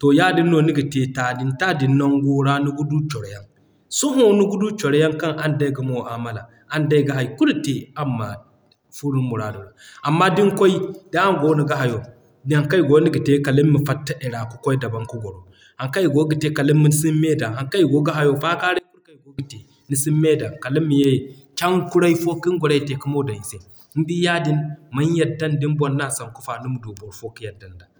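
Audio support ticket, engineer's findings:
Audio dropout to a faint residue, 18.79 to 19.39 s, after "i goo ga hayo", speech resuming at "ga te ni sin". About 0.6 s of signal lost, with only faint sound remaining, roughly 25 dB below normal level. Cut and return both abrupt, not a pause or fade. Likely cause: momentary loss of the wanted feed upstream while the downstream path stayed live and passed residual pickup.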